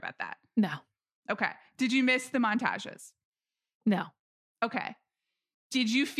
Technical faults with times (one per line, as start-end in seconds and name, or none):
none